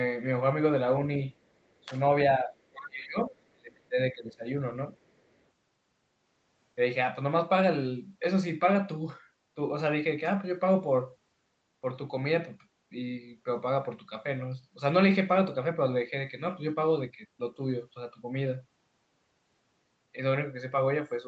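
Speech dips at 1.85, 2.37, 2.72 and 3.53 s. The last two cut deep and run to 3.37 and 4.46 s. This is likely speech suppressed in double talk: the canceller turned both sides down.

From 5.04 to 5.34 s, a very faint second voice sits under the speech. It is likely the other side's voice leaking through, echo the canceller missed.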